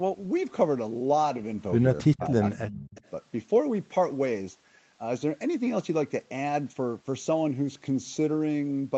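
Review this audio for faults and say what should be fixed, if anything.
Between 2.03 and 2.95 s, the echo canceller most likely misread a stretch of double talk, where both ends were speaking at once, as echo and attenuated the near-end signal along with it. The result is speech suppressed in double talk: the talker's level dips by up to about 25 dB, with around 0.7 s of that window audibly turned down. Prevention: tune the double-talk detector so near-end speech is held rather than ducked when the far end is active.

Echo leak appears in three scraps, from 2.2 to 2.27 s, 2.69 to 2.73 s, and 2.95 to 3.1 s. The likely cause is that the loudspeaker end's canceller failed to remove everything its microphone picked up, so some of it was sent back. Each scrap is a faint copy of the voice trailing by 265 ms. It sits about 15 dB below the speech at first, then about 20 dB, then about 25 dB. Prevention: improve the acoustic echo canceller's convergence and residual echo suppression at the loudspeaker end.

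The 8 kHz bandwidth limit from the Opus call path can be heard throughout. It is expected behaviour and needs no fix.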